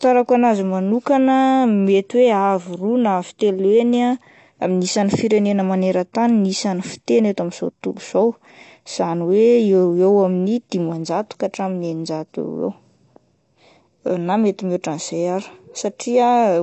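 From start to finish the speech sounds dull and smeared, with nothing above about 8.1 kHz. Sibilants turn fizzy and sustained sounds warble. This is likely AAC compression at a low bitrate, around 32 kbps. The encoder drops high bands and thins the spectrum to save data.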